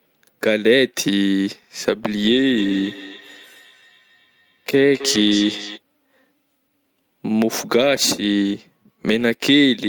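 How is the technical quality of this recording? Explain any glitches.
The recording has one clear glitch, a feedback echo between two devices from 2.57 to 5.81 s. A second device in the room replays the speech, the microphone picks it up again, and the local echo canceller cannot remove it. The speech returns roughly every third of a second, thinner and ringing, peaking at about 14 dB below the speech. On a spectrogram this shows as faint, evenly spaced copies of each syllable trailing behind it.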